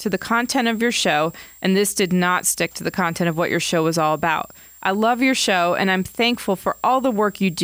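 A switching supply whistle runs under the speech throughout, a thin tone wandering between about 7.3 and 7.7 kHz, roughly 25 dB down, from a switching supply in audible burst mode or beating with another.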